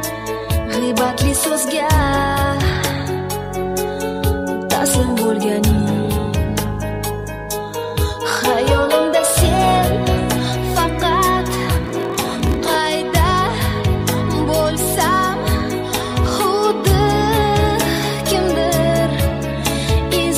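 A 20-second audio clip with a block size mismatch (padded) from 11.82 to 12.76 s. A buzz at about 43.1 Hz appears and the sound slows to roughly 0.94 of its normal speed. The cause is one stage delivering short blocks into a larger read, which fits a 1024-sample block, with each shortfall zero-filled so a tiny gap recurs every block. Timbre stays put, which separates this from a sample-rate mismatch, where slowing also lowers pitch.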